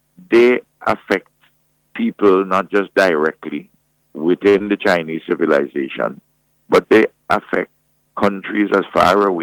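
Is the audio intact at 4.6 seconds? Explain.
No, not quite. There's a short stall from a late packet at 4.49 to 4.56 s: the buffer ran dry, so the last sound gets held about 50 ms with a slight buzz or dip. Right after, at 4.58 to 4.62 s, comes a short concealed packet loss: roughly 20 ms never arrived, and the gap was patched by extending the prior sound, leaving a brief smear or wobble.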